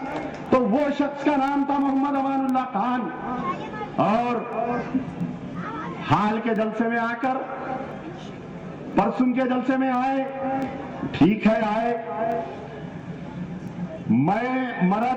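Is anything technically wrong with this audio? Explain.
Yes. Word clock ticks, 0.12 to 15.03 s: an unlocked receiving clock slips against the sender's, dropping or repeating a sample, so ticks recur roughly every third of a second.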